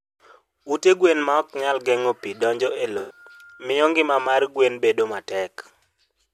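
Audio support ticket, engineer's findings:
Corrupt frame concealed, 2.98 to 3.18 s: concealed span in the speech, about 0.2 s long. AAC decoder caught flipped bits and masked the span, consistent with several consecutive damaged frames.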